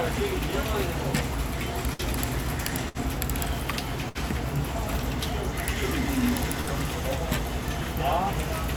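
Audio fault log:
1.93–2.02 s, 2.89–3.02 s, 4.09–4.18 s, 6.61–6.70 s: burst of packet loss. About 60 ms of audio never arrived in time each time. The receiver stretched the last sound and faded it, then playback resumed with that stretch missing.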